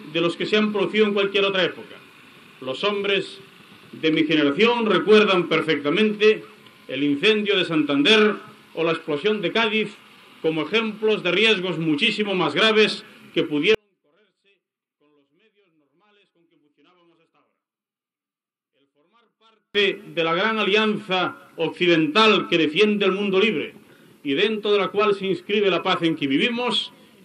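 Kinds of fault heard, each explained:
One channel inverted: From 13.7 to 19.7 s the sound drops by about 41 dB and almost disappears. The likely cause is one stereo channel with reversed polarity. Summed to mono, everything shared by both channels cancels, leaving only a faint residue.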